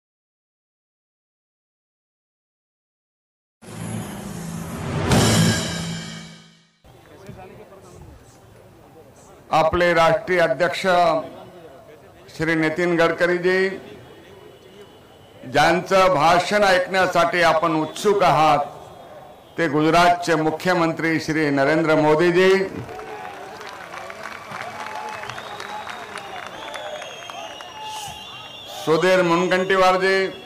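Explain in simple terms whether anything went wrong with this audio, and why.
Hard clipping crops up six times, at 5.09–5.52, 9.53–11.14, 12.42–13.65, 15.55–18.56, 19.60–22.57 and 28.89–30.22 s. The sound got too big for the system, so its peaks were sliced flat, and that's the harsh, fuzzy crackle on the loud parts.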